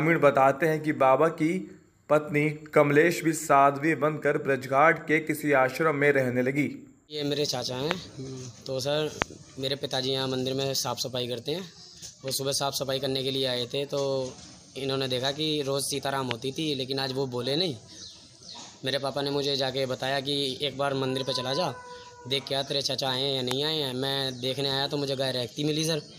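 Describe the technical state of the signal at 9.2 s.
Right at 9.22 to 9.24 s there's a single loud pop, sitting roughly 25 dB above the surrounding sound. It's most likely a sudden voltage spike, say from a switch, static or a driver glitch, riding on top while the sound carries on underneath.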